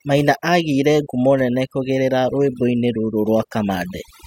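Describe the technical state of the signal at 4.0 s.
At 4.0 s the speech is still under overdone noise removal, which runs through the whole clip. The reducer gates individual frequency bins that sit near its noise estimate, so the background falls to near silence flecked with twinkling specks, and quieter parts of the voice drop out. A spectrogram shows scattered isolated dots in the gaps and ragged, holed harmonics.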